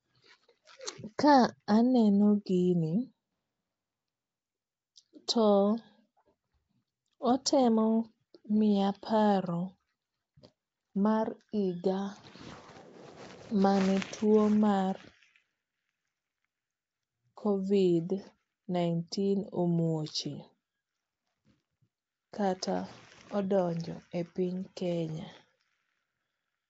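Throughout, the speech sounds hissy, rough and smeared, likely from Nellymoser compression; the spectrogram cuts off sharply at 7.8 kHz, with weak bands showing grainy noise.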